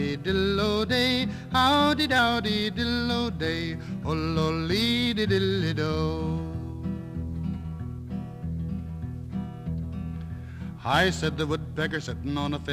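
A drift correction step, likely a clock-sync rate jump, speeds the sound 5.5% from 0.88 to 2.19 s, lifting pitch 93 cents before snapping back.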